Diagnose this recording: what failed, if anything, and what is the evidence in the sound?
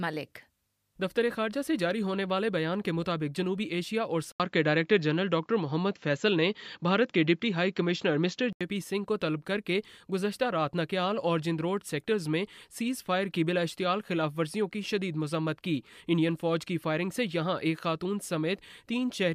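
From 4.32 s to 8.61 s the sound turns duller and boxier, with a short gap of about 80 ms at the switch, a level shift of roughly 5 dB, and a faint new noise floor well below the signal. On a spectrogram, the content above 7.6 kHz vanishes abruptly for that span, and the waveform shows the brief dropout and the step in amplitude. The likely cause is an input switched to a poorer device at the driver or device-routing stage.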